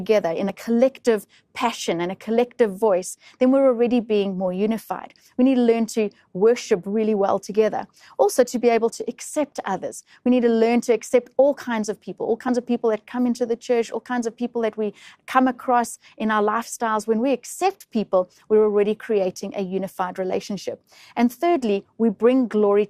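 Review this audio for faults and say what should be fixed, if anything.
Overlap between stream segments occurs at 0.49 s and 12.48 s. Two segments, each 4.0 s long, carry overlapping time stamps. The player trims that overlap from sound that was never doubled. About 10 ms disappears, and the waveform jumps as a brief skip. To prevent it, make segment time stamps contiguous at the packager so each boundary neither overlaps nor leaves a gap.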